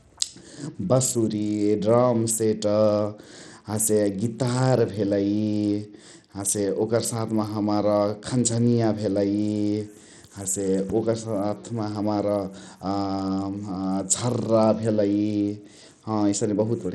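Throughout the speech, the likely cause is Bluetooth SBC compression at a starved bit pool, consistent with roughly 80 kbps. Upper sub-bands get too few bits and the rest are coarsely quantised, so treble flickers and drops away while a plainly audible gritty, aliased texture rides on the sound.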